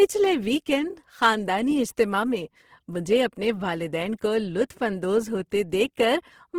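Opus compression, present from start to finish of the speech, is the likely cause of the grainy, rough texture. The codec in its CELT music mode keeps each band's energy but, short of bits, patches band detail with folded copies of lower bands or with noise. The damage is plainly audible: the voice sounds noisy rather than swirly, which fits a low rate near 16 kbps. Bandwidth stays full, reaching to about 20.2 kHz.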